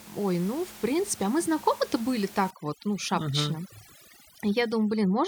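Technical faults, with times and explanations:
2.51–5.27 s, overdone noise removal: a noise reducer set too strong shuts off frequency bands near its noise estimate, leaving twinkling near-silence and taking quiet parts of the voice with them.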